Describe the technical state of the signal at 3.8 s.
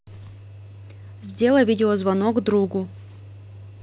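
At 3.8 s the speech is intact, with no dropout, glitch or distortion, only the steady narrowband sound of the call path, whose G.711 A-law coding leaves nothing above 4 kHz.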